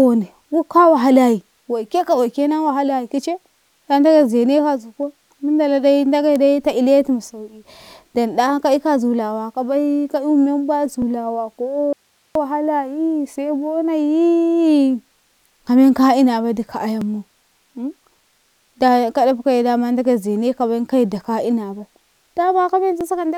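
Audio missing between chunks at 11.02, 17.02 and 23.01 s: each brief skip, a few milliseconds long and six seconds apart, likely comes from audio lost as one processing chunk closes and the next opens, with the speech spliced straight across. Audio dropout to a faint residue from 11.93 to 12.35 s: the speech cuts out abruptly for 0.42 s, leaving only hiss far below its level, so the signal was likely lost while the path stayed live.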